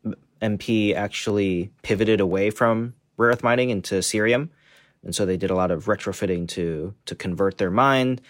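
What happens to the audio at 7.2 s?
Two devices likely running on separate clocks let the buffer between them drift until a small block of roughly fifteen samples is dropped or repeated. At 7.2 s this falls within clock drift buffer slips from 0.28 to 7.4 s, heard as a click in the speech every 1.02 s.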